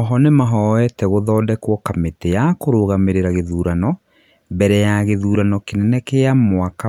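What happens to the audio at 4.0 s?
Nothing goes wrong at 4.0 s; the speech carries on intact through that moment, with no dropout, click or distortion.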